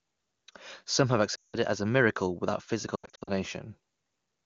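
Lost AMR speech frames occur twice. From 1.36 to 1.56 s, about 180 ms of frames fail their checks, so the decoder stretches the last good frame with falling gain. The sound smears, fades quickly to silence, and returns rough. From 2.96 to 3.32 s, shorter losses of up to 80 ms each scatter over about 320 ms and cause repeated brief dips and warbles.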